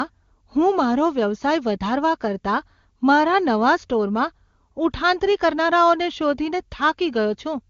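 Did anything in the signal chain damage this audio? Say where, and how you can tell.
No, the speech has come through an AMR wideband (HD Voice) coding stage whose clear, wideband sound fits the codec's top 23.85 kbit/s mode, leaving at most faint coding traces and no damage a listener can point to anywhere in the chain.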